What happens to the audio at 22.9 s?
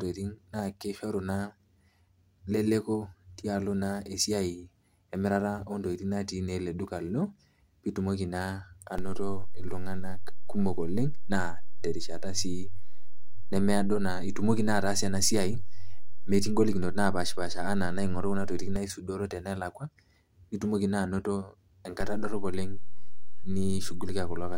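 A DC step begins at 22.01 s and holds to the end: the waveform's zero line jumps by about -23 dBFS, heard as a low thump while the speech continues unchanged.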